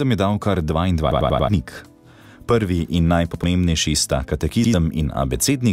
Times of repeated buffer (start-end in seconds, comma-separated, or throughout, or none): 1.11-1.49, 3.34-3.44, 4.64-4.74